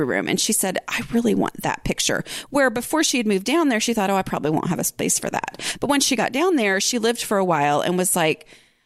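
Nothing stood out on listening to this speech clip.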